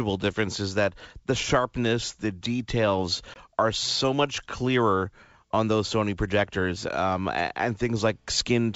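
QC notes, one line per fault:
3.34–3.37 s, packet loss on an ADPCM call: right after "the sharpness the details" a hard-edged gap of about 20 ms, roughly one packet, drops to silence before "are so much clearer". The receiving ADPCM decoder's predictor and step size lose track of the sender's, so the speech comes back slightly distorted, settling within some tens of milliseconds as the adaptation re-converges on the G.722 stream.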